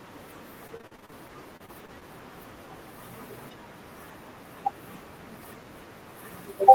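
From 0.67 to 2.03 s there's repeated packet loss (robotic sound). Fourteen short holes, up to 39 ms, get patched by stretching the last sound, so it goes choppy.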